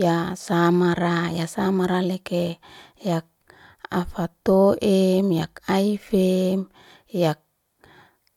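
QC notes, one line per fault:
No faults heard anywhere in this speech clip.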